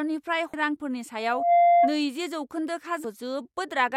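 At 0.54 s the speech breaks up briefly, a sign of damaged data in a compressed stream: the decoder misreads corrupted frames, loses sync and hunts for the next header. From 1.20 to 1.99 s a loudspeaker feedback squeal takes over. The microphone is hearing its own loudspeaker, and the loop gain at 691 Hz exceeds one. That tone swells over roughly a third of a second to about 10 dB above the speech. Its growth from nothing sets it apart from a steady interfering tone. At 3.04 s the same kind of stream damage returns as another short blip.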